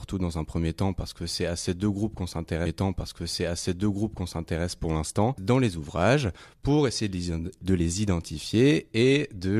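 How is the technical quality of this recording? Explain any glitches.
There's one clear glitch. At 2.65 s a stream segment repeats: the player queued the same chunk twice, so about 2.0 s of speech replays, with a small blip at the jump back near 4.65 s.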